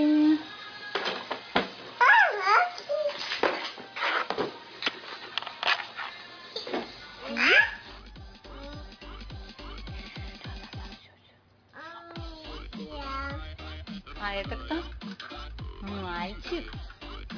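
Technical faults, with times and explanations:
No technical faults detected anywhere in the clip.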